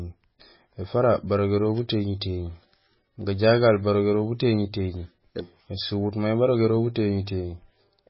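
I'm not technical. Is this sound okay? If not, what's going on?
No. The recording was likely squeezed hard with MP3 compression, which throws away detail to save space. Throughout, everything above about 5.5 kHz is gone, so the speech sounds dull and muffled, with a watery, swirling quality and smeared edges on sharp sounds.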